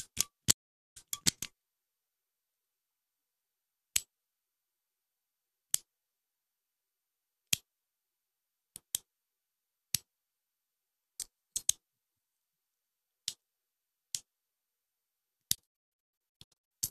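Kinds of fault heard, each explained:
Digital broadcast dropout: the receiver muted while frames were lost or failed their checksum, so the sound fades out in 8 ms and goes silent at 0.52–0.97 s, then in scattered holes across 15.55–16.71 s, longest 144 ms, appearing as blank spectrogram columns and flat waveform gaps.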